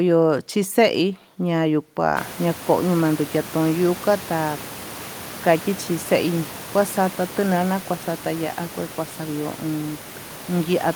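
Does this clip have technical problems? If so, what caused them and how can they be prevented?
No, this clip doesn't have technical problems, so nothing caused any and there is nothing to prevent.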